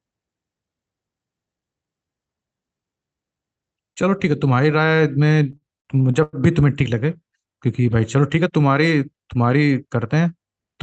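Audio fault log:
5.52 to 6.36 s, repeated stalls (stutter): the speech hitches five times in under a second, with the receiver holding onto the last bit of sound while it waits for late packets to arrive, about 190 ms of stretched-out filler in all and the longest hold near 100 ms. Nothing actually goes missing, but roughly a quarter of that stretch is padding, so it drags and stumbles before catching up, all riding on the call codec's top end, which stops around 8 kHz.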